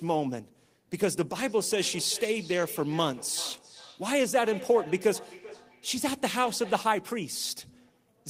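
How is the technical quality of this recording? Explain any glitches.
The recording has one clear glitch, a feedback echo between two devices. From 1.47 to 6.91 s the speech comes back about every 0.4 seconds, peaking about 16 dB below the speech. A second device in the room replays the call, this microphone re-captures it, and its echo canceller can't remove sound another device plays.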